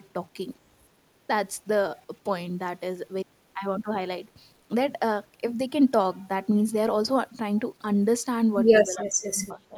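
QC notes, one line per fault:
Throughout, low bit depth without dither: a grainy, rasping distortion rides on the speech and moves with it, roughest on quiet syllables and decaying word endings, where the sound breaks into a coarse buzz. The error sits around 40 dB below the speech and tracks its level. The likely cause is samples rounded to a coarse set of levels with no dither to smooth the steps, which fits roughly 9-bit rounding.
8.88 to 9.77 s, speech suppressed in double talk: in the last second the speech dips sharply, falling by as much as about 30 dB. Around 0.7 s of that stretch is affected. The likely cause is an echo canceller that, with both ends talking at once, could not tell the local talker from the loudspeaker echo and turned the speech down along with the echo.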